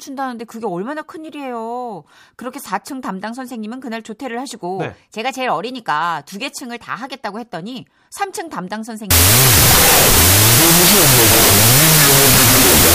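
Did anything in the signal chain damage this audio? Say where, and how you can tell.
Yes. From 9.11 s to the end at 12.94 s the speech collapses into loud, harsh noise with a faint trace of the original underneath, playing at half speed and about an octave low. That points to a wrong sample width at the sample-format conversion stage: the data fit 32-bit float samples being read as 16-bit integers. Each true sample is split into two garbage values, halving the speed, and only some values carry meaningful high-order bits.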